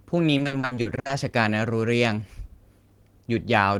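From 0.37 to 1.11 s, repeated packet loss (robotic sound): holes up to 60 ms, filled by repeating prior sound instead of going silent, leave the speech choppy with pieces missing.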